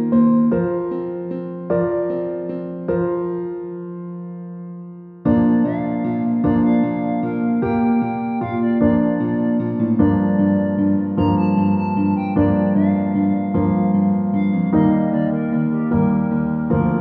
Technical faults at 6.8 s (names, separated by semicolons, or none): none